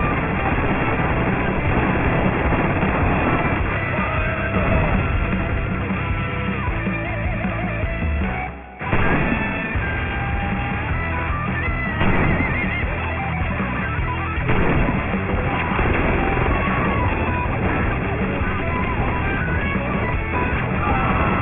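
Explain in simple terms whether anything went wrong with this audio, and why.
From start to finish, the top of the sound is gritty and metallic, with stray tones that don't belong and a hard ceiling near 3 kHz. This is aliasing: the audio's detail was cut down without first filtering the highest frequencies, so they folded back as false pitches.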